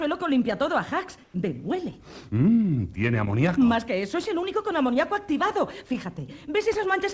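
From 1.24 to 1.34 s, a 100 ms stretch of background turns flat and featureless, about 5 dB quieter. This is likely comfort noise in place of the background. The sender paused transmission, and the receiver filled the gap with synthetic noise, with nothing above 8 kHz.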